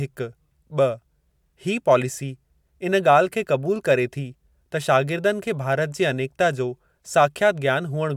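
Speech recording with no audible technical faults.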